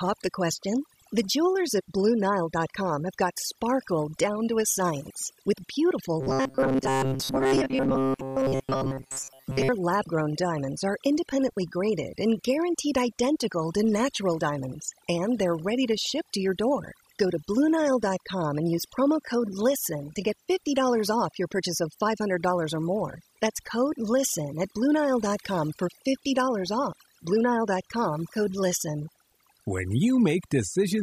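Speech, with overdone noise removal all the way through: the background drops and breaks up into twinkly specks. From 6.21 to 9.69 s it turns into a rigid, metallic robotic buzz at 133 Hz, likely from repeated short buffers of about 7.5 ms standing in for most of the real audio there.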